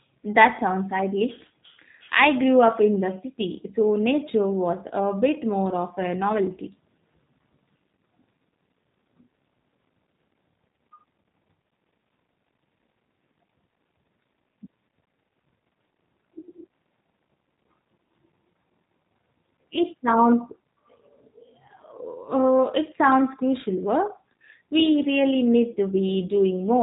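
Speech runs through the whole clip with the character of the G.729 codec, most likely the G.729A variant, and the damage is plainly audible. Nothing is left above about 3.8 kHz, so sibilants and consonant detail are dulled, and the voice has the slightly rough, synthetic quality of speech rebuilt from a vocal tract model, a pitch predictor and a sparse pulse excitation, which fits an 8 kbit/s narrowband VoIP link.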